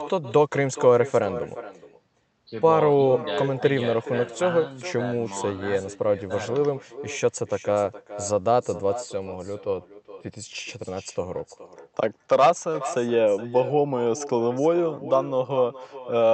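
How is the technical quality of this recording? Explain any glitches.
The recording is marred by a single persistent fault, an echo with no canceller, running through the entire clip. At the far end the call was evidently played over a loudspeaker, and the microphone there picked it up again. No echo canceller removed that returning signal, so the speech made the network round trip and arrived back roughly 0.4 s late. The result is a constant shadow trailing every phrase, about 15 dB below the direct speech, thinner in tone. It sits under the call codec's band limit near 8 kHz.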